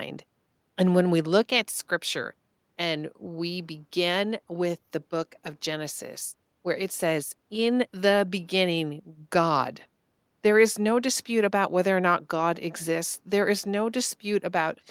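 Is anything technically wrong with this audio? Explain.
No, nothing technically wrong can be heard here.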